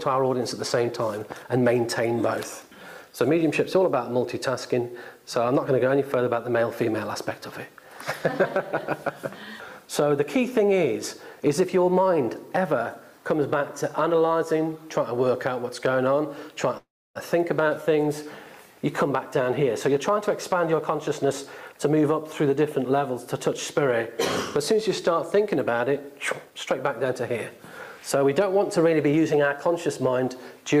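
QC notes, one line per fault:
16.77–17.17 s, call audio freeze: the sound stalls for about 0.4 s. The last moment is stretched into a fading buzz, then about 0.29 s of silence. Nothing is lost, so everything after arrives about 0.38 s late. The likely cause is delayed packets emptying the jitter buffer. On a spectrogram this shows as a smeared, decaying band and then a blank column. On the waveform it is a tapering tail and then a flat line.
19.09–21.24 s, 26.45–27.05 s and 28.00–29.88 s, jitter buffer speed-up: playback runs at 104%, 117% and 107% while pitch stays put, so the second and third stretches feel hurried. Short pitch-period chunks are cut to drain excess delay, roughly 0.1 s in each of the first two stretches and 0.15 s in the last. The spectrogram keeps the harmonic spacing while events crowd closer in time.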